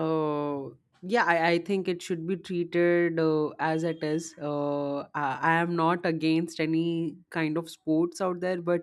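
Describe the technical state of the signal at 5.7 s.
At 5.7 s the speech signal is intact, with no audible fault at that moment.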